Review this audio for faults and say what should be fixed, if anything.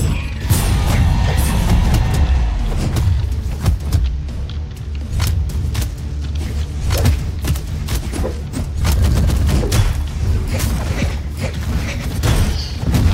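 No faults turn up in this audio, so nothing needs to be fixed.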